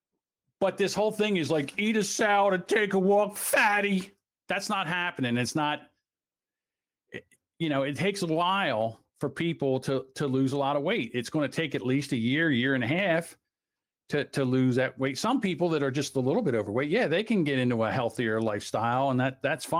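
No technical fault can be heard in the speech, which carries only the light coding texture of Opus voice compression at full audio bandwidth, consistent with a moderate bitrate around 24 kbps in its hybrid mode.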